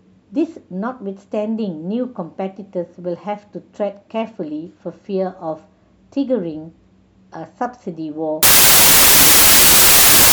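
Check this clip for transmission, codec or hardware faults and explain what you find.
One fault, in the last part of the clip. From 8.43 s to 10.33 s the speech collapses into loud, harsh noise, with the voice faintly audible underneath at half speed and an octave low. This is a wrong sample width: the sound fits 32-bit samples being read as 16-bit, so each sample splits into two values and the low halves come out as noise.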